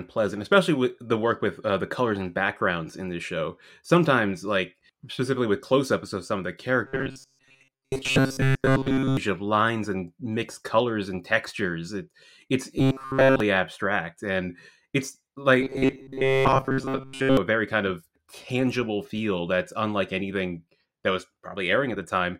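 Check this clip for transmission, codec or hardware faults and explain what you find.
One fault appears three times in the speech: robotic sound from repeated short buffers, at 6.85–9.17 s, 12.78–13.40 s and 15.61–17.37 s. The likely cause is starved playback looping roughly 7.5 ms segments over roughly 70% of each affected stretch, imposing a rigid 134 Hz metallic buzz that still roughly tracks the words.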